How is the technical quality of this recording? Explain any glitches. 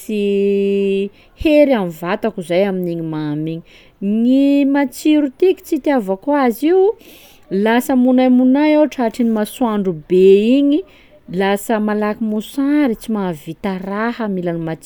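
No glitches turn up anywhere in this speech recording, so there's nothing to explain.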